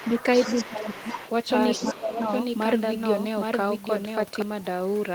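From 0.0 to 0.68 s, other side's voice leaking through: a second voice about 10 dB below the speech, likely residual loudspeaker echo the canceller missed, showing as faint overlapping harmonic striations. From 0.69 to 1.07 s, speech is suppressed in double talk: the voice dips by roughly 15 dB, likely because the canceller turned everything down during overlap, leaving a visibly notched waveform envelope. The leaked voice returns from 0.93 to 1.31 s at the same low level. From 1.50 to 4.42 s, a doubled audio track runs: a full-band copy about 700 ms behind and roughly 5 dB quieter, likely a second capture path, appearing as a shifted duplicate spectrogram pattern with abrupt edges. More leakage sits at 1.72 to 1.99 s, and a second suppression dip from 1.78 to 2.33 s again cuts the speech by roughly 15 dB.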